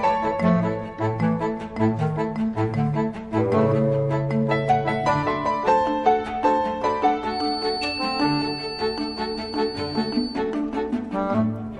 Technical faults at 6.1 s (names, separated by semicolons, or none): none